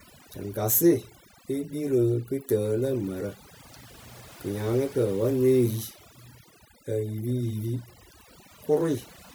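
From start to finish, the gaps between phrases sink to an unnatural near-silence dotted with twinkling specks, while the voice itself has its quieter detail hollowed out. This is overdone noise removal: a noise reduction stage set far too aggressively on a noisy recording has pulled individual frequency bands down hard wherever they sat close to its noise estimate, stripping the soft parts of the speech along with the noise.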